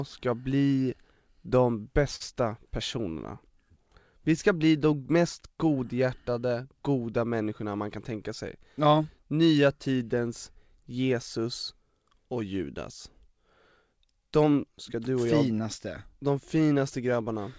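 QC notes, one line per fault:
2.16–2.22 s, short stall from a late packet: a packet arrived late and the jitter buffer ran dry, so the receiver stretched the last sound by about 43 ms until it came, then resumed where it stopped. One sound is held too long with a faint buzz or dip, and nothing is lost.
7.96–8.48 s, jitter buffer speed-up: the buffer had built up more delay than it targets, so the receiver trimmed several short pitch-period slices, around 40 ms in total. The speech runs at about 106% speed with pitch unchanged and sounds briefly hurried, over a G.722 path band-limited to 8 kHz.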